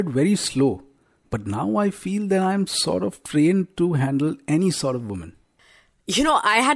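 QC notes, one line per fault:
No faults heard anywhere in this speech recording.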